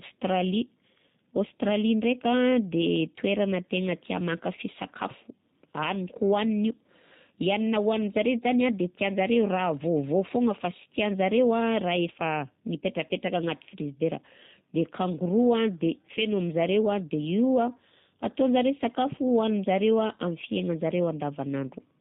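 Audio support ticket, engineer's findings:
G.729 codec damage, whole clip. Speech band-limited, nothing above 4 kHz. Roughness and a synthetic edge are plainly audible. Speech is rebuilt from a vocal tract filter, pitch predictor and sparse pulses per frame. Fits an 8 kbit/s G.729A VoIP leg.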